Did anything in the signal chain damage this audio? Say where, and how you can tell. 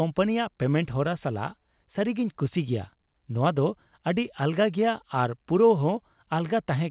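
No, nothing in the chain damaged this speech.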